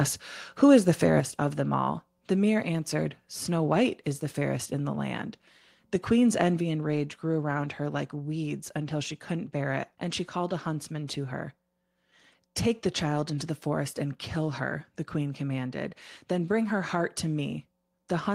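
At 1.2 s, between "is the" and "of them all", the speech and background drop together by about 5 dB: a microphone volume step-down, likely the call software lowering input gain.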